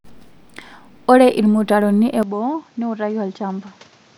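An input switched to a poorer device is the likely cause of the change at 2.23 s, where the speech turns duller and narrower through to the end of the clip. Nothing above 7.6 kHz comes through from that point, the level drops by about 5 dB, and a new background noise appears some 30 dB under the voice. No gap marks the switch: the sound simply changes character mid-stream.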